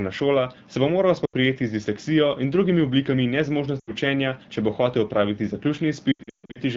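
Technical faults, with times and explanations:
1.25–1.34 s, 3.79–3.92 s, 6.12–6.59 s: lost AMR speech frames. After "bo moral" and again at 3.79 s, 80 ms of speech fades to near silence within two frames. The decoder repeats the last pitch and vocal-tract settings at falling gain, so the sound fades out rather than cutting off abruptly. From 6.12 s, losses scattered over 440 ms, longest 140 ms, leave the sound warbling and thinning before the light HD Voice coding returns.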